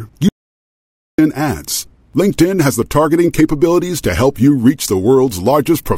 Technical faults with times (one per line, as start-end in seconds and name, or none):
0.29-1.18 audio dropout to silence